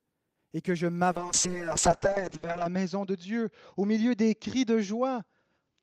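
At 1.12 s, right after "et que je", a call bitrate drop sets in and persists to the end. The bandwidth narrows from 20 kHz to 8 kHz, and the sound turns muffled and watery, which fits the encoder falling from about 32 kbps to 6 kbps.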